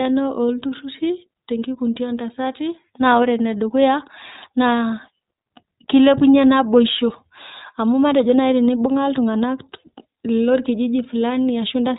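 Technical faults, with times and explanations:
Throughout, iLBC codec: the speech has been squeezed through a narrowband VoIP coder that rebuilds each 20 ms frame's excitation on its own, with nothing carried over from the frame before. The rough, slightly synthetic grain is plainly audible, and nothing above 3.8 kHz survives, so sibilants and consonant edges sound dull and boxed-in. The texture fits iLBC's 15.2 kbps mode.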